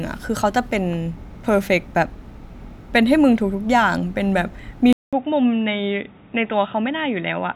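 At 4.93 s the sound cuts out for 200 ms. When it returns, it has changed character until the end. Nothing comes through above 3.8 kHz, so the speech turns dull and boxy. It is also a little quieter, by roughly 5 dB. A faint new background noise sits well under it. This points to an input switched to a poorer device, likely a different microphone or a headset's call profile.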